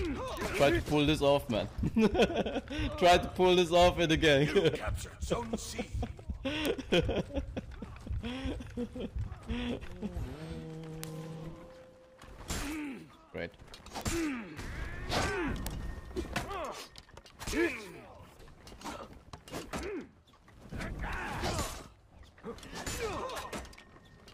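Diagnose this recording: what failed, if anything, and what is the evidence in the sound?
Bit error spike in storage or on a digital link: single sharp broadband ticks at 0.37, 6.66, 11.04, 14.01 and 15.67 s, peaking at about -19 to -7 dBFS. Each is unrelated to the sound, as when a flipped bit throws one or two samples off by a power of two.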